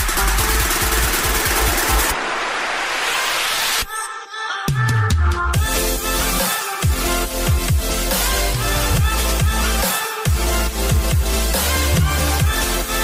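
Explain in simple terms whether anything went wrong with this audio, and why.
Nothing went wrong here: no technical faults can be heard anywhere in the recording.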